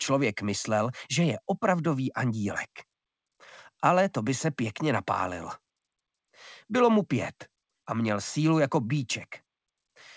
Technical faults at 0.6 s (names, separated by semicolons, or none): none